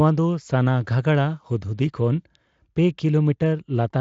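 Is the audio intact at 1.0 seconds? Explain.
Yes, the speech is intact at 1.0 seconds, with no fault at that moment.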